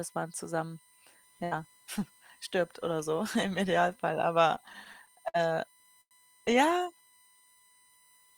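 A thin, steady whine sits under the speech for the whole clip, faint at roughly 35 dB below it. It is pitched on a 1 kHz series and is loudest at the 9 kHz harmonic. This is USB whine: the bus's 1 ms frame timing pulls current in bursts that leak into the audio through power or ground.

From 4.55 to 5.36 s the speech stutters and drags. Eight brief holds, the longest 58 ms, add up to about 126 ms of filled sound, roughly 16% of that stretch, and nothing is lost. These are repeated stalls (stutter): packets kept arriving late, the jitter buffer kept running dry, and the receiver extended the last sound each time until data returned.

At 6.01 s one sound is held for about 98 ms before the speech resumes exactly where it stopped. This is a short stall from a late packet. The buffer emptied while waiting, and the receiver stretched the last sound to bridge the 98 ms delay.

From 6.91 to 8.19 s the speech runs slow at unchanged pitch, at about 89% speed. 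Sounds are drawn out, with roughly 155 ms added in total. This is a jitter buffer slow-down: to rebuild its reserve, the receiver repeated single pitch periods and pause fragments over and over.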